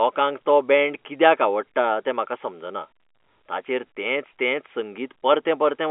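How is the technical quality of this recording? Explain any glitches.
No glitches can be heard in this speech recording. It has come over a telephone line with G.711 A-law coding at 64 kbps, so the sound is confined to the narrow telephone band of roughly 250 Hz to 3.4 kHz.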